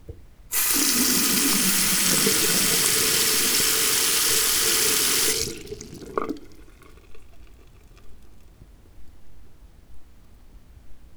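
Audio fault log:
6.03–8.75 s, periodic clock jitter: the converter's sampling clock is wobbled at a steady rate of around 1 kHz, so every component in the sound gains paired sidebands spaced about 1 kHz above and below it. The upper components are hit hardest, which gives a rough, metallic edge. On a spectrogram, parallel copies flank each band at that spacing.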